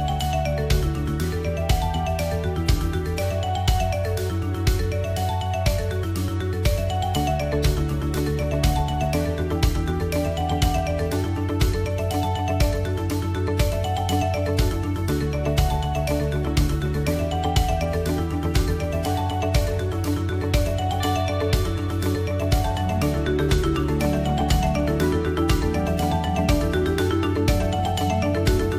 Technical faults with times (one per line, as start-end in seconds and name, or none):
none